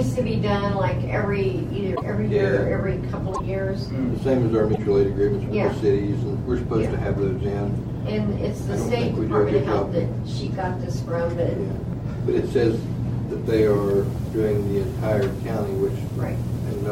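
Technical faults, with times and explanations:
1.95 to 2.02 s, 3.33 to 3.40 s and 4.72 to 4.79 s, broken MP3 bit reservoir: each of these three short glitches lasts about 70 ms, and the sound lurches forward and breaks into a brief chirp, burst of noise or short hole before settling. The likely cause is missing frames in an MP3 stream, at 26.1 ms per frame, where the following frames reach back into the reservoir for borrowed data and decode bytes belonging to another frame.
13.46 s to the end, low bit depth without dither: from here quiet sounds turn grainy, with a rough distortion that tracks the level and texture of the sound and sits roughly 30 dB below it. The likely cause is requantisation to 7 bits by plain rounding with no dither, so the error stays correlated with the signal instead of becoming a steady hiss.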